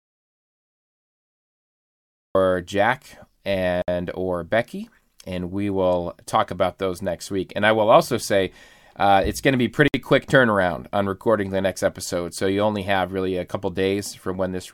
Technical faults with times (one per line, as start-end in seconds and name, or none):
0.00-2.35 audio dropout to silence
3.82-3.88 gap at a join of encoded pieces
9.88-9.94 gap at a join of encoded pieces